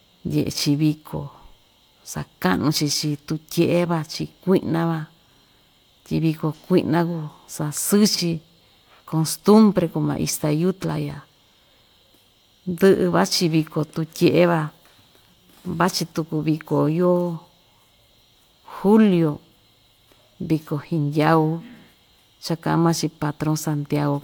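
The speech recording shows no technical faults anywhere in its signal.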